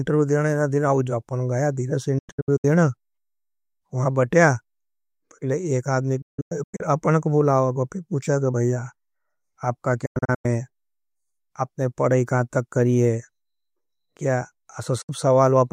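Digital broadcast dropouts at 2.18–2.65 s after "अपनों गाया धिरा से", 6.22–6.81 s, 10.06–10.46 s and 15.02–15.10 s: the receiver lost frames and muted, leaving fast-faded holes in the speech.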